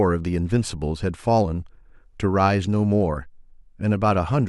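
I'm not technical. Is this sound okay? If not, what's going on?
Yes, no faults heard.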